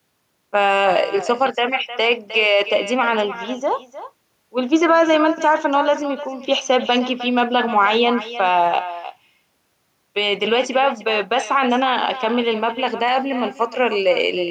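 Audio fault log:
throughout: echo with no canceller, speech repeats roughly 300 ms later, about 13 dB quieter, from the far-end loudspeaker; spectrogram shows faint delayed copies trailing each syllable.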